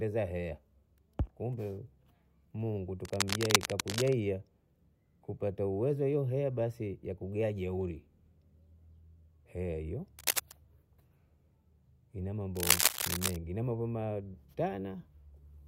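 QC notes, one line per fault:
3.05–4.14 s, 10.19–10.53 s and 12.55–13.37 s, cable scratch noise: dense, ragged bursts of scratchy rustle over the speech, about as loud as it and a bit louder in the last one. Likely a worn cable or connector being moved, its contact resistance jumping around.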